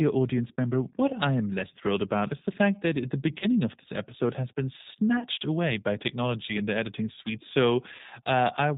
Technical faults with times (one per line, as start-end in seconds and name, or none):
0.00-8.77 G.729 codec
3.40-3.46 VoIP packet loss concealed by the speech codec
5.20-5.27 VoIP packet loss concealed by the speech codec
7.97-8.01 VoIP packet loss concealed by the speech codec